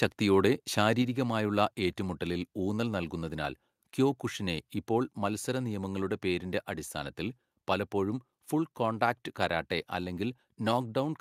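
A speech recording in which, at 1.02 s, the voice and the background beneath it drop together in level by about 3 dB in a single abrupt step, with no fade, and stay at that lower level afterwards. This is a microphone volume stepped down fault, likely caused by call software judging the input too hot or close to clipping and cutting the device's input volume in one move, so everything after that instant is captured quieter.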